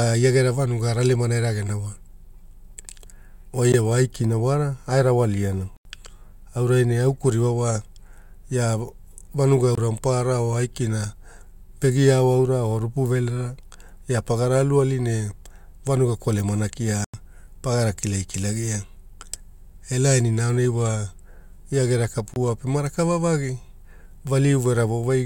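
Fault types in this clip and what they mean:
Block of digital silence: five hard cuts to silence, from a 16 ms gap at 3.72 s to 90 ms holes; three lengths fit 1024- and 4096-sample buffers left unfilled.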